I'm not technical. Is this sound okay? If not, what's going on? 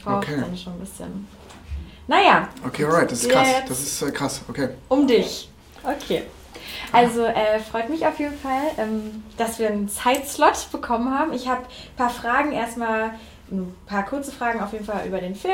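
Yes, nothing in this audio stood out as a problem when listening to it.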